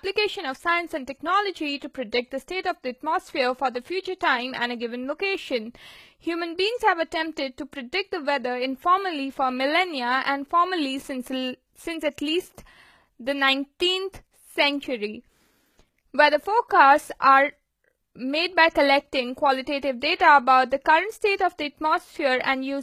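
HE-AAC compression runs throughout the speech. The upper treble sounds rebuilt rather than captured, likely by spectral band replication copying lower bands upward, so harmonics misalign and s sounds turn gritty and lispy. Nothing remains above 14.9 kHz, and the damage fits roughly 20 kbps.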